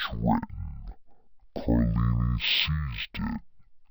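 Throughout, the speech drags at half speed and sits a full octave low: stereo read as mono, with left and right samples strung together as one channel.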